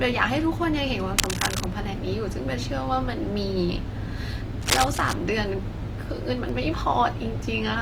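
Throughout the recording the speech carries plainly audible codec damage, likely Opus compression. The full bandwidth is kept, but tones turn grainy and rough, with a noisy texture where clean tonal detail should be. That points to an encoder running in its music-oriented mode at a low bitrate, around 24 kbps, which keeps each band's energy but fills detail with folded or noise-like content when bits run short.

From 1.18 to 1.69 s, and again from 4.61 to 5.14 s, dense, uneven bursts of scratching noise sit over the speech at roughly the same loudness as the voice itself. Each half-second burst has the ragged, rustling quality of cable scratch noise. The likely cause is a worn cable, connector or control being moved, so that its contact resistance jumps rapidly and injects erratic noise into the signal path.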